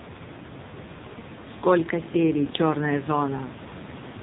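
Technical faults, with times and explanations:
Throughout, AMR narrowband mobile codec: the speech sounds buzzy, thin and synthetic, with nothing above 4 kHz, and the room noise, about 13 dB below the speech, churns into a swirling warble. The sound was squeezed through an 8 kHz phone-band codec that rebuilds the voice from a vocal-tract model fed by only a few pulses per 5 ms slice. The heavy damage fits one of its lowest modes, around 5.9 kbps.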